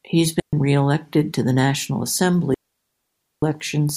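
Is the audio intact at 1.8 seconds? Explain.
Yes, the audio is intact at 1.8 seconds, with no fault audible at that moment.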